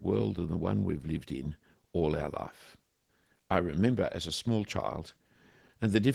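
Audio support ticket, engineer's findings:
Listened to the full speech recording and nothing stood out as a fault.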